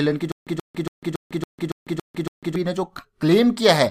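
Stutter with silent gaps, 0.32 to 2.56 s: a 130 ms burst repeats eight times, each followed by 150 ms of digital silence, likely a stalled stream replaying its last fragment.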